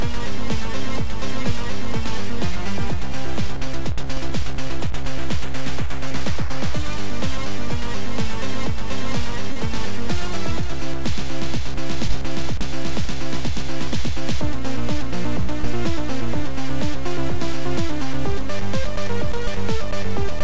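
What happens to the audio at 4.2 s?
Short concealed packet loss, from 4.14 to 4.18 s: about 20 ms of audio never arrived, and the receiver extended the preceding sound before blending back, leaving a brief smear.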